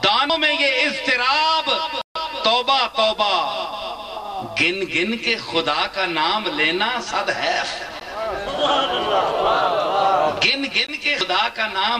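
At 8.00 s there's a block of digital silence, about 13 ms where the sound just drops out, and another at 10.87 s lasting about 17 ms. Neither has a fade, so the sound slams off and back on. The first is short enough to come across as a tick rather than an audible hole. It sounds like the output buffer wasn't filled in time on those two passes.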